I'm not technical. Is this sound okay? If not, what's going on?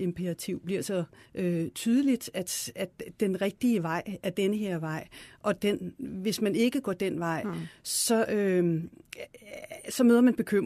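No. The speech jumps slightly at about 5.26 s and again at 9.24 s. This is an overlap between stream segments. The audio arrives in chunks of about 4 seconds, and the player wrongly trims a sliver of real sound where chunks meet. The result is a tiny click or skip.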